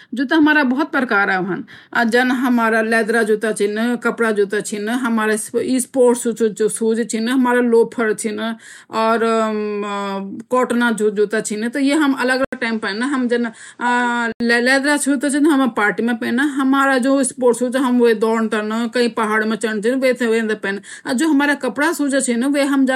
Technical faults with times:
12.45-14.40 input switched to a poorer device

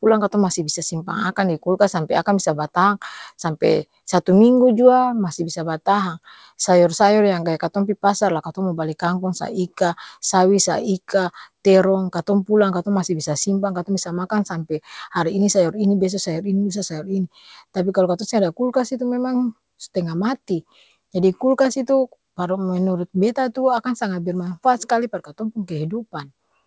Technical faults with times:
none

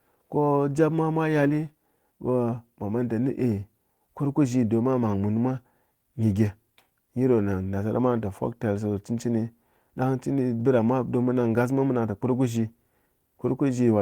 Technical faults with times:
none

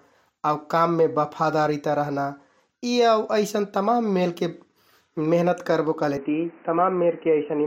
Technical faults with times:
6.17-7.67 input switched to a poorer device

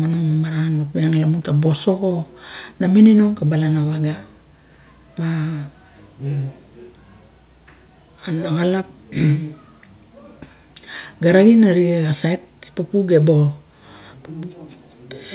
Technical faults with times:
none

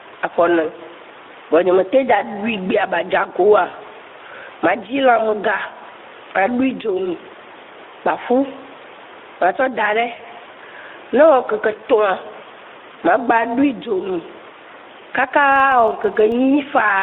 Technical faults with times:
0.00-17.02 gain pumping
0.00-17.02 Speex codec
3.67-3.76 VoIP packet loss concealed by the speech codec
10.15-10.23 VoIP packet loss concealed by the speech codec
15.40-16.37 filter restarted on every block

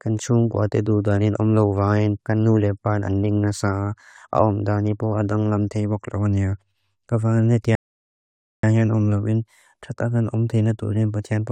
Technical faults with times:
7.75-8.63 rebuffering stall

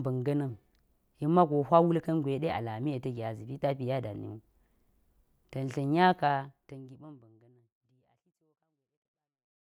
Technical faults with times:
none

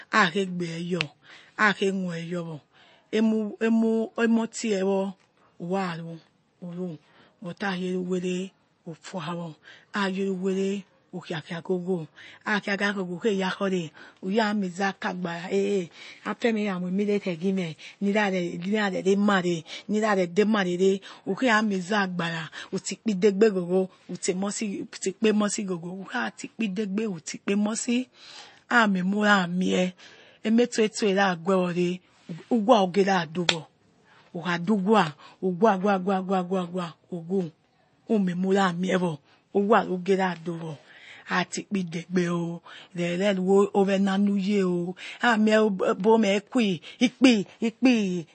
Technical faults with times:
0.00-48.34 MP3 compression

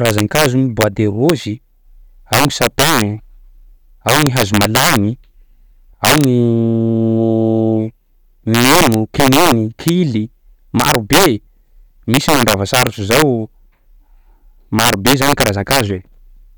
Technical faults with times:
0.00-16.57 integer overflow

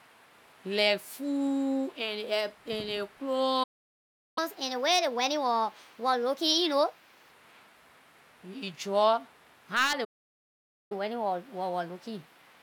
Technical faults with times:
3.63-4.38 playback stall
4.38-7.31 catch-up at higher speed
10.04-10.92 playback stall
10.92-12.62 catch-up at higher speed

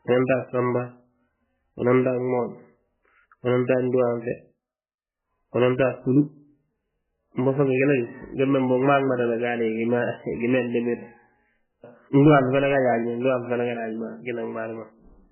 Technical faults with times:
0.00-15.32 MP3 compression

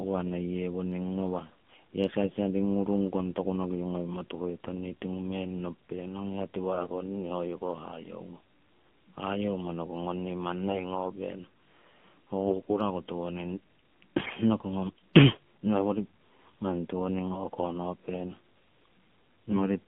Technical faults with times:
0.00-19.88 AMR narrowband mobile codec
2.22-2.33 AMR bit errors
6.75-6.89 AMR bit errors
12.48-12.78 AMR bit errors
14.18-14.36 AMR bit errors
19.52-19.68 AMR bit errors

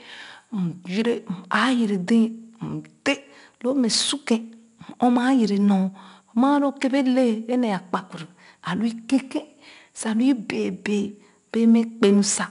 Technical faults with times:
0.00-12.51 4-bit ADPCM compression

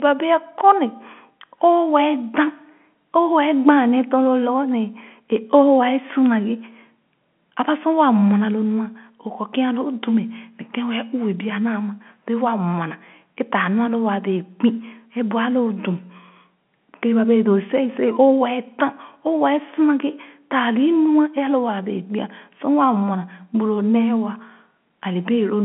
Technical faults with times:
none

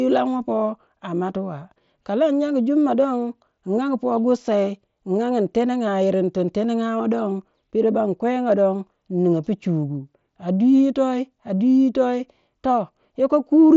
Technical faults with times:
none

